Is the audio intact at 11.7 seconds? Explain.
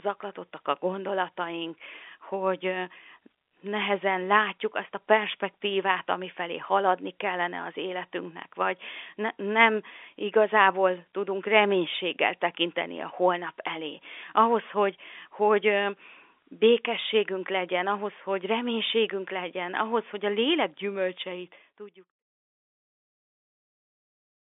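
Yes, the audio is intact at 11.7 seconds, with no fault heard at that moment.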